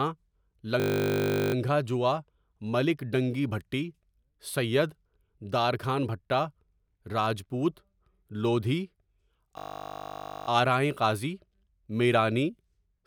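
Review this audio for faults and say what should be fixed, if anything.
A system hang loop occurs at 0.80–1.54 s and 9.58–10.48 s, just before "آرائیں قاضی". A 20 ms slice of the speech repeats exactly, producing a steady 50 Hz buzz. The waveform shows identical repeating cycles, and a spectrogram shows evenly spaced harmonic lines every 50 Hz. To prevent it, keep the audio thread from stalling and add a watchdog that mutes output when the buffer stops being refreshed.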